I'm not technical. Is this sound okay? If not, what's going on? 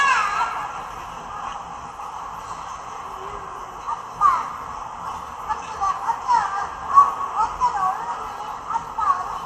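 No. The whole clip sounds dull and gurgly, with a grainy edge. This is most likely MP2 compression, an older way of shrinking audio files. It saved space by dropping the highest parts of the sound and roughly approximating the rest.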